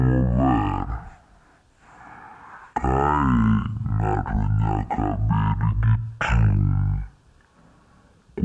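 Wrong sample rate, throughout: the speech plays at half speed and a full octave low, 12 semitones down, because the samples are read out at half the rate they were captured at, which fits 44.1 kHz audio played near 22 kHz. Every syllable drags, deep and sluggish.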